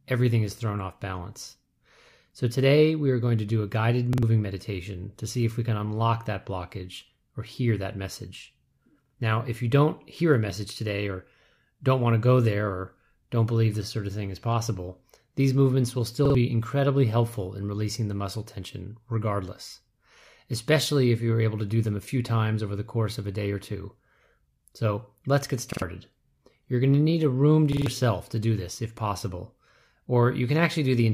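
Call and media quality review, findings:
Repeated buffer at 4.13–4.23 s, 9.06–9.15 s, 16.25–16.35 s, 25.73–25.82 s and 27.73–27.86 s in speech. The same 46 ms slice plays twice extra, three times at 27.73 s, with hard joins, heard as a brief stutter. The output device likely replays its last block when fresh audio arrives late, which fits a 2048-sample buffer. Around a tenth of a second of speech is skipped at each event, closer to 150 ms at the last one.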